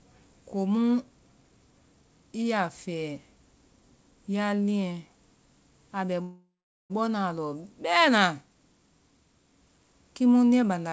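Right after "a bɛ", at 6.22 s, the speech stops and a fading buzz carries the last sound on for a moment, then drops to silence for about 420 ms before the talker picks up again at 6.92 s. That's a call audio freeze, likely from packets stalling until the jitter buffer ran dry. Nothing gets skipped: the 0.68 s gap is inserted, so everything after it lands that much later. The band tops out at 8 kHz, which fits a G.722 call path.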